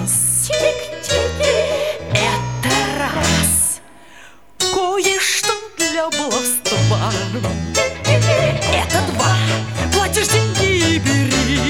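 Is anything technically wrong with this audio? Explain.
No, nothing technically wrong can be heard here.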